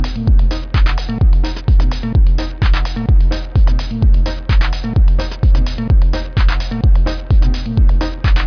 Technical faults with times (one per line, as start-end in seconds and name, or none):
none